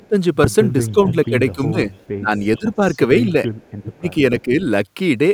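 Speech on a call, with its level repeatedly pulled down and a delayed copy of itself leaking back. The speech suppressed in double talk shows as dips: the opening 0.00 to 0.16 s drops by roughly 30 dB, stretches between 0.92 and 2.81 s lose about 20 dB for around 0.7 s in total, and 3.83 to 4.53 s sinks by roughly 30 dB again for about 0.4 s. This is likely an echo canceller ducking the near talker while the far side also talks. Unlike a network dropout, the sound is turned down and gated rather than broken up with clicks or repeats. The echo leak is a second copy of the speech trailing by 447 ms. It is loudest from 0.89 to 1.26 s at about 10 dB below the speech, weaker from 1.92 to 2.97 s at about 25 dB down, and barely present from 3.61 to 3.72 s at about 35 dB down. This is likely residual loudspeaker pickup that the canceller failed to remove. A distinct delayed copy of the speech nearly half a second behind it sets it apart from room reverberation, which decays smoothly right after the sound.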